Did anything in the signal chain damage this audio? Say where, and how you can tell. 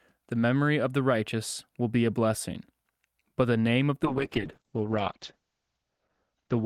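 Yes: a call bitrate drop in the codec from 4.06 s, 64 to 8 kbps. The starved encoder cuts everything above 8 kHz on the spectrogram, leaving coarse, muffled speech.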